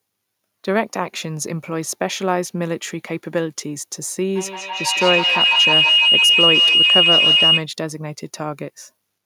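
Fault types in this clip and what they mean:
feedback howl: 4.36 to 7.68 s, the mic-to-speaker loop gains each pass, growing into a tone near 3 kHz, pulsing about every 150 ms, about 7 dB above speech.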